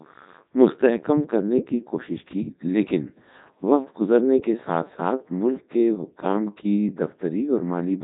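From start to finish, the speech carries heavy Codec 2 vocoder damage. No waveform survives. The decoder rebuilds the voice from sine waves using only pitch, voicing, energy and a spectral envelope. It sounds robotic and buzzy, with nothing above 3.8 kHz, which fits Codec 2's 3.2 kbit/s mode.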